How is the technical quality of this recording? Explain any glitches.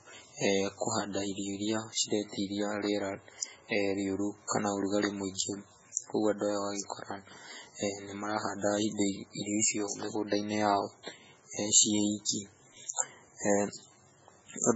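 The technical quality is poor. Heavy MP3 compression damage runs through the whole recording. Nothing remains above 7.7 kHz, and the speech sounds watery and swirly, with metallic chirps on s sounds. The likely cause is an encoder starved of bits, consistent with about 16 kbps. It cut the treble at a fixed point and dropped weak frequency lines, which flicker between frames.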